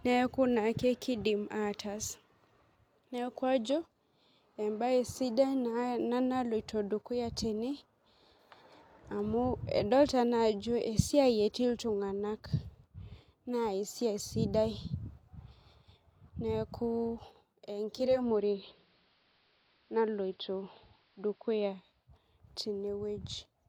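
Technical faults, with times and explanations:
17.92–22.13 s, digital radio blending to analogue: a 0.48 s cross-fade to AM dulls the treble, seen as a lower spectrogram ceiling, adds faint hiss, and shifts level about 2 dB.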